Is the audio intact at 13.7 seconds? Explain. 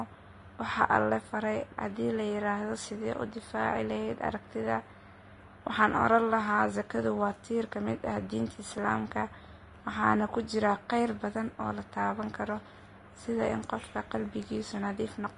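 No. Vorbis compression damage runs through the whole clip, 13.7 s included. The speech has nothing above 10.6 kHz, and the remaining treble is hissy and grainy. This is likely low-quality Vorbis encoding, and the extent of the damage points to a rate around 32 kbps. At that rate the codec lowers its cut-off and quantises the upper band so coarsely that fine detail turns into noise of similar energy, roughening tones and blurring attacks.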